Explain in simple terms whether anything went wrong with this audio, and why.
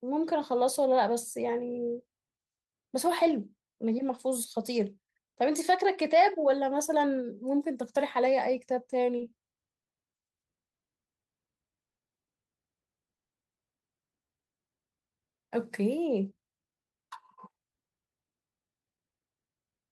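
Several things went wrong, all from about nine seconds on in this speech clip, and they all come from the receiving end struggling with late-arriving audio.

From 9.17 to 10.23 s there are repeated stalls (stutter). The speech catches five times in about a second. Each catch is short, the longest about 60 ms, and the gaps are filled by stretching the last sound. Nothing is lost, but the speech drags and hiccups. The audio kept arriving late, so the receiver's small waiting store ran dry again and again.

Three brief dropouts follow, at 10.67, 11.82 and 13.16 s. Each is a call audio freeze. The sound simply goes silent for 110, 160 and 150 ms, then carries on where it stopped. No speech is missing. A gap has been slipped in instead. The likely cause is that the audio was held up on its way, so the receiver had nothing to play and waited.

From 14.25 to 14.80 s comes a jitter buffer slow-down. 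The speech runs slower, at about 86% of normal speed, but the pitch does not drop. About 85 ms of extra sound is added by repeating tiny slices of the voice. The receiver did this to build up a reserve, after running low or deciding to hold more audio in waiting, so sounds there feel a little drawn out.

From 16.41 to 19.72 s there is a jitter buffer speed-up. The speech runs about 13% fast at the same pitch and sounds hurried. Tiny slices were cut out many times, adding up to about half a second. The receiver had built up too much waiting audio. It trimmed the backlog to catch up with real time.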